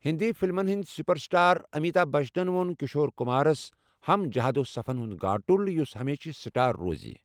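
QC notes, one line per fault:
Nothing to flag on this one; the speech comes through with no faults heard anywhere in it.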